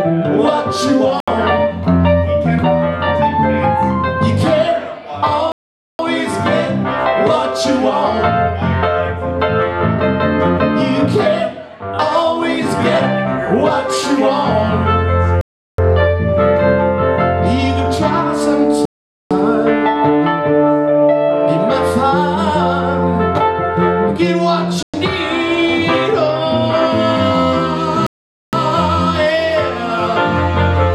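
Bluetooth stalls occur six times: at 1.20 s (about 73 ms), 5.52 s (472 ms), 15.41 s (371 ms), 18.85 s (452 ms), 24.83 s (110 ms) and 28.07 s (464 ms). Each time the sound cuts abruptly to silence and then resumes. The likely cause is radio interference delaying packets, so the headphones' buffer ran empty and playback halted until the retransmitted audio arrived. The longer gaps, close to half a second, are distinct dropouts.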